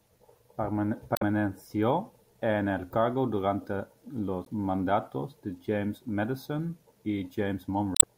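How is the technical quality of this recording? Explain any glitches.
The speech has three short glitches from damaged data in a compressed stream. They occur at 1.14–1.23 s, at 4.42–4.48 s between "en el cargo durante" and "mandatos de", and at 7.93–8.04 s. Corrupted bytes make the decoder lose frame sync and hunt for the next header. Each lasts about a tenth of a second or less.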